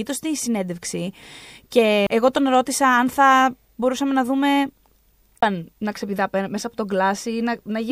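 CD skip at 2.07 s, just before "εγώ τον ρώτησα αν", and again at 5.41 s: a knock or a flaw made the laser jump to another turn of the disc's spiral, so the speech briefly mutes, a few milliseconds the first time and about 20 ms the second, then resumes from a different point.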